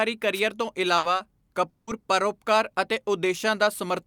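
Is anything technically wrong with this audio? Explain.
Yes, three separate faults interrupt this speech. From 0.33 to 0.40 s a short swish of static is heard, a wireless microphone noise hit, where the FM radio signal faded and receiver noise rose.

From 0.97 to 1.06 s the sound stretches into a held buzz or fading hiss for about 60 ms, then skips ahead. This is a burst of packet loss, where the receiver concealed roughly 60 ms of missing audio.

From 1.69 to 1.90 s a longer fading buzz or hiss of about 180 ms ends in about 30 ms of silence before the speech resumes with a section gone. The likely cause is a long network dropout, where about 180 ms of audio never arrived and was papered over by the receiver.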